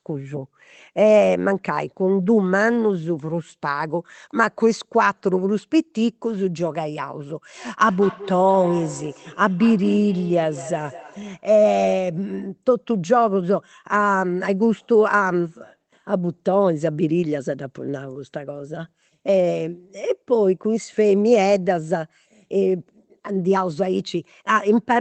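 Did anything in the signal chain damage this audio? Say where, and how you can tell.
Yes. Feedback echo between two devices runs from 7.82 to 11.45 s, a call-processing fault. The speech comes back at a steady interval of about a fifth of a second, peaking at about 16 dB below the direct sound. Two devices in the same room share the call; one plays the other's outgoing audio, and that microphone captures it again. Each echo canceller only subtracts its own device's playback, so this path escapes cancellation.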